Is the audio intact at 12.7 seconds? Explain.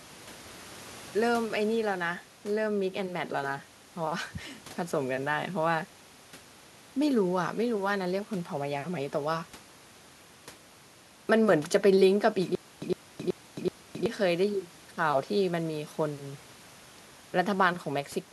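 No. From 12.55 to 14.06 s, a stutter with silent gaps repeats a 108 ms burst four times, each followed by 268 ms of digital silence. A stalled stream retrying is the likely cause. The waveform shows identical blocks between flat silent stretches, and the spectrogram shows repeated slabs with empty columns.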